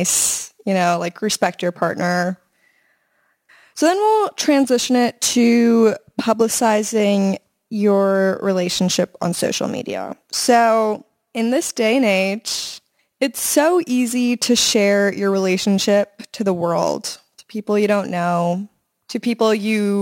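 From start to finish, the speech carries a crude rate conversion fault. Samples were dropped rather than filtered. The pattern points to a conversion from 48 kHz down to 44.1 kHz. Because the dropping follows the ratio of the two rates, the error repeats regularly and forms shifted, inharmonic copies of the voice. It sits roughly 25 dB below the speech. It is heard as a gritty, inharmonic fizz that rides on louder and brighter sounds.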